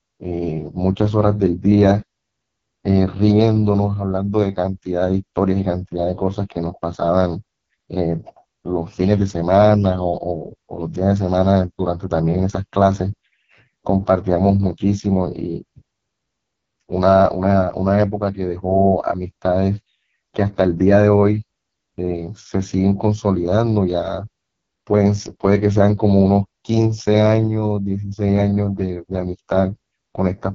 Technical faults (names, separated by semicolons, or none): AMR wideband (HD Voice) codec